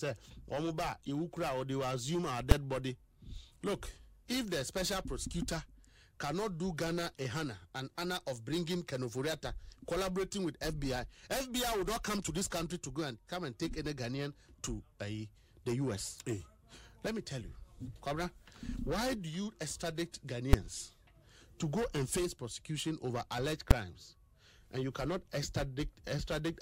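Invalid numbers at full scale strike at 2.51 s, 20.53 s and 23.71 s. Each time, a calculation yielded infinite or invalid values that were clamped to the largest positive or negative sample value, pinning the output at full scale for a whole processing block. The block lasts about 5.8 ms, which fits a 256-sample block. That is too short for separate pops at its edges to be heard, so each event lands as a single sharp, very loud bang.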